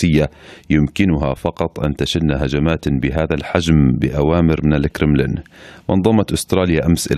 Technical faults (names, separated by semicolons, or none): none